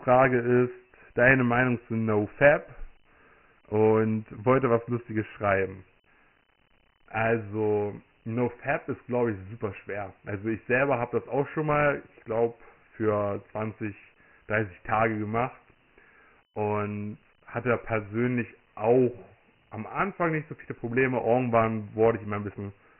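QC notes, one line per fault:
Throughout: Dialogic VOX ADPCM, heavy damage. The speech is coded as 4-bit adaptive differences at a low rate, which fits 6,000 samples a second and about 24 kbps, so nothing survives above 3 kHz. Coarse step sizes leave a gritty hiss riding along behind the speech.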